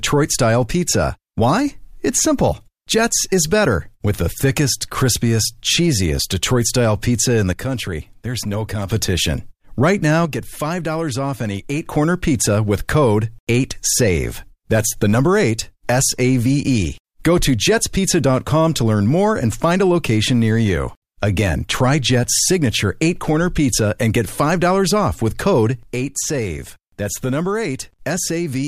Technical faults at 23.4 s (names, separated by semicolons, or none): none